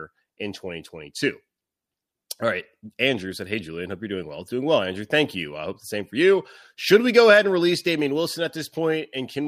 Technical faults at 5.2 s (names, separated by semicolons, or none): none